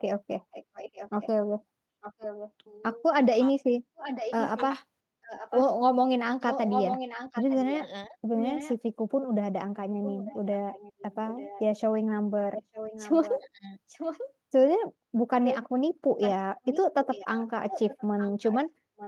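From 0.51 to 2.52 s, and again at 3.96 to 8.76, 10.04 to 14.32 and 15.45 to 19.07 s, there is an echo leak: a distinct copy of the speech trailing by 895 ms, about 15 dB down at first and about 10 dB down later. The likely cause is a loudspeaker echo canceller letting its pickup through. The long, separate delay sets it apart from room reverberation.

Speech suppressed in double talk occurs at 8.09 to 8.18 s (a dip of about 10 dB) and at 13.39 to 13.71 s (a deeper cut of about 25 dB). Both fall where the echo overlaps the talker, likely because the canceller ducked both together. The sound is turned down rather than lost outright, which distinguishes it from a packet dropout.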